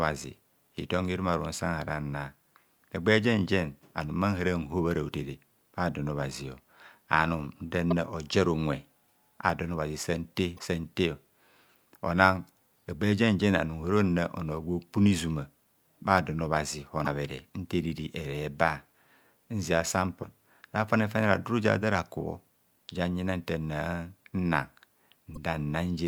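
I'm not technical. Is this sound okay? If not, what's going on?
No. Some of the data in this compressed speech file was damaged, so the player briefly lost its place and had to search for the next readable chunk. That causes short chirps or blips at 7.90–7.93 s (just after "hotere adon obhazio anum"), 10.55–10.59, 17.03–17.07, 20.20–20.24 and 25.35–25.37 seconds. This is called damaged data in a compressed stream.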